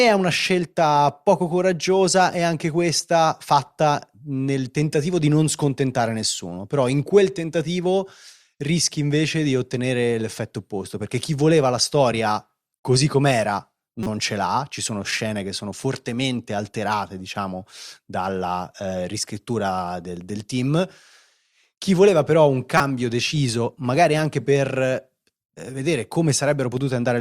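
At 14.03–14.07 s, just before "ce l'ha ci sono", and 22.77–22.80 s, before "deciso magari anche per", a corrupt frame decoded: damaged bits misplace spectral energy, producing short chirps, blips or bursts of noise, the second about 10 dB stronger than the first.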